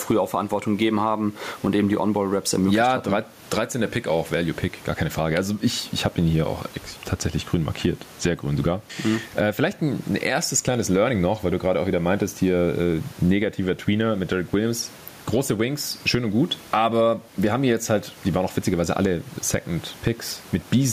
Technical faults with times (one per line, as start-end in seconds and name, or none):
0.00-20.93 gain pumping